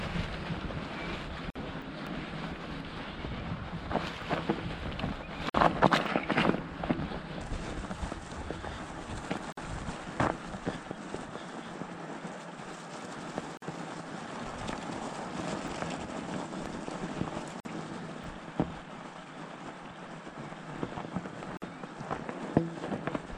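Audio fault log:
1.50, 5.50, 9.52, 13.57, 17.60 and 21.57 s, gap at a join of encoded pieces: a brief silence of about 49 to 52 ms with smeared edges opens every 4 s, then the sound resumes where it stopped. Separately encoded pieces were joined untrimmed, keeping encoder delay and last-frame padding.
1.82, 4.22, 6.06, 15.68, 18.24 and 20.78 s, dropped buffer (overrun): the sound jumps ahead with no silence, the skip sounding like about 20 ms at most points, nearer 40 ms at 1.82 s and 70 ms at 20.78 s. Likely the program collected its samples too late and the hardware had already overwritten them.
2.07 s, 10.91 to 11.17 s and 16.66 to 16.90 s, loud pop: sharp pops sit on top of the sound, which continues underneath. There is a single pop at 2.07 s, about 10 dB above the sound, and a pair within each later range at about 15 dB. The likely cause is a sudden voltage step or pulse added to the signal.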